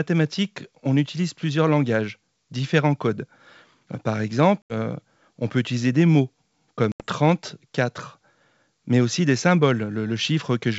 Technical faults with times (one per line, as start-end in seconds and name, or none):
4.62-4.74 packet loss on an ADPCM call
6.92-7.03 packet loss on an ADPCM call